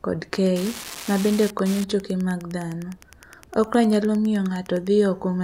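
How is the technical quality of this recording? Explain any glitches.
A steady ticking runs under the speech from 0.34 s to 4.88 s, close to ten clicks a second at a rate that never varies, sitting roughly 20 dB below the voice. This is Wi-Fi interference: a nearby wireless radio transmits a beacon every 102.4 ms, and the audio circuitry picks up and rectifies each burst, turning the radio pulses into audible clicks at the beacon rate.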